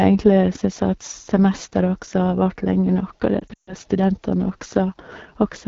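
The whole clip has the AMR wideband (HD Voice) codec's rough, raspy edge, which fits its low 8.85 kbit/s mode, with thin noise-filled highs above 6.4 kHz.

From 3.40 to 3.74 s, lost AMR speech frames hit: the decoder drops to near silence within two frames during a 140 ms gap, then comes back rough.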